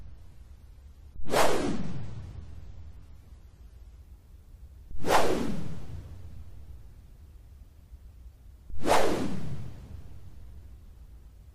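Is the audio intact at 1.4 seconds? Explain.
No. At 1.4 s the clip is inside an adaptive stream starting at a low bitrate, which lasts from 0.0 to 4.0 s. The player opens on a cheap rendition to start quickly, then switches to a better one once it has gauged the connection. Until then the treble is thin, with nothing above 14 kHz, and codec artefacts are strong, consistent with roughly 32 kbit/s AAC. At 4.0 s quality jumps without a gap, to what sounds like about 96 kbit/s.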